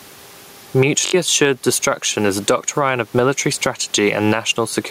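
From the start and all the way through, there's gain pumping: the speech sounds squashed, with loud and soft parts pulled closer in level, a swing of around 10 dB, and the room noise sits about 36 dB under the speech. That's likely a mic gain set far too high, with a fast limiter clamping down on each peak.

Then at 1.07 to 1.14 s there's a Bluetooth stutter. Packets arrived late or went missing, so the receiver kept replaying its last short slice, giving a quick buzzy machine-gun repeat. Speech picks up about 64 ms further on, which fits roughly three dropped frames.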